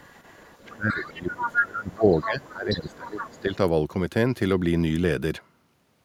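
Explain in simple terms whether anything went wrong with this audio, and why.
Yes, two things went wrong. The echo canceller likely failed to remove all of the far end's loudspeaker sound from the microphone, so the other side's voice leaks through. It is heard faintly from 0.0 to 1.08 s, more strongly at 1.38 to 1.57 s, briefly at 2.21 and 2.5 s, and again from 2.91 to 3.55 s.

The second problem is speech suppressed in double talk. When both sides talked at once, the canceller likely could not tell the talker apart from the echo and turned everything down. The talker's voice sinks sharply from 0.67 to 2.06 s and from 2.23 to 3.57 s.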